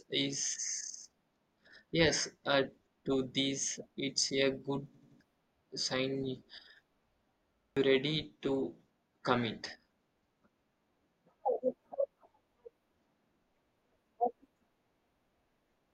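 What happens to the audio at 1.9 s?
Nothing goes wrong at 1.9 s: the speech there carries on intact, with no dropout, click, glitch or change in level.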